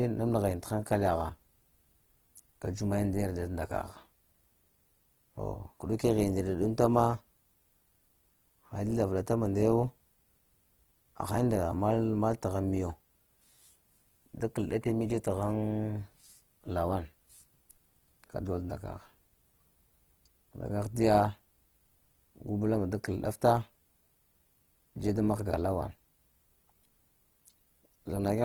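Throughout, likely Opus compression in its music mode at a rate fitting about 16 kbps keeps full bandwidth, yet leaves the speech plainly grainy, rough and noisy.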